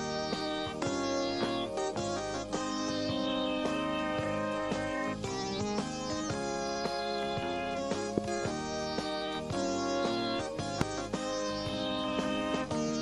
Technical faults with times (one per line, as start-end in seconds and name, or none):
0.82-0.85 loud pop
8.18-8.20 loud pop
10.81-10.83 loud pop